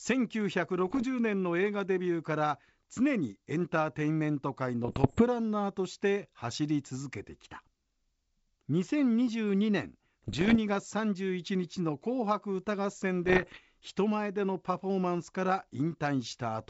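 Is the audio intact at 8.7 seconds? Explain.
Yes, at 8.7 seconds the speech is intact, passing cleanly through G.722 wideband telephone coding at 64 kbit/s with no break or damage at that moment.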